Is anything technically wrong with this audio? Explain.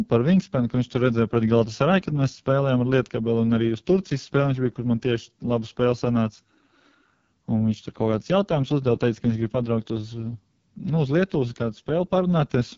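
Yes, the whole clip carries heavy AMR wideband (HD Voice) codec damage. Throughout, the speech sounds rough and raspy, which fits the lowest 6.6 kbit/s mode. At that rate the codec's pulse-driven vocal tract model is too coarse to represent the speech cleanly. A spectrogram would show a hard ceiling at about 7.3 kHz with a smeared, noise-like band just below it.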